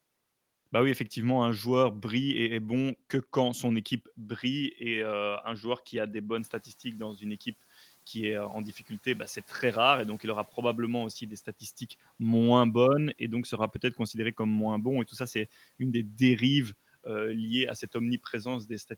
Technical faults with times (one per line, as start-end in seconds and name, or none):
6.37-7.47 noise suppressor catching up